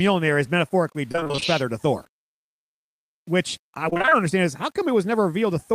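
The speech was likely requantized to very few levels with plain rounding and no dither, which fits roughly 8-bit resolution. Throughout, the error tracks the signal at around 35 dB below it, so quieter syllables and decays turn gritty and grainy, with the grain shifting as the sound changes.

Repeated packet loss (robotic sound) strikes from 1.11 to 1.43 s, between "is metaphorically" and "feather to", and again from 3.89 to 4.13 s, just before "understand is how". Each hole, none longer than about 25 ms, is patched by extending the preceding sound, covering about half of each stretch. The result is choppy, robotic audio with fragments missing.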